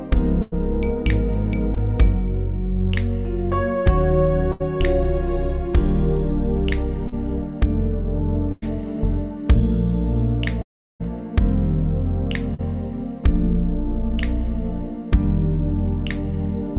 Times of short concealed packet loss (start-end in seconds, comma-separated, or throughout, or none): 7.08-7.14, 12.54-12.61